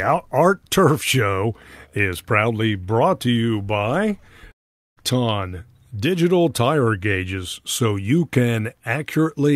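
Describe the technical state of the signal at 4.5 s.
At 4.5 s the speech breaks off right after "brought to you by". The gap runs from 4.51 to 4.99 s. This is likely a long network dropout: packets stopped arriving and the receiver had nothing to play. It stretches the last sound into a fading buzz or hiss, then falls to silence. About 0.46 s of audio is lost. The speech resumes later, with that stretch simply gone.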